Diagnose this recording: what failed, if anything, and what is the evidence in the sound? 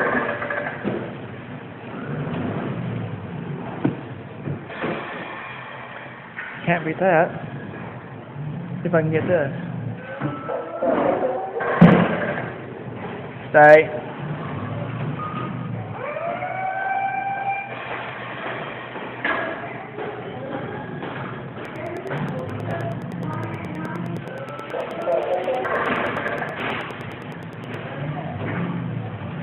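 A train of clicks runs from 21.65 to 27.75 s: around fifty similar pulses at a steady 9.5 per second, peaking about 5 dB above the signal. Their regular spacing, unlike random crackle, points to likely interference coupling into the analogue wiring or interface.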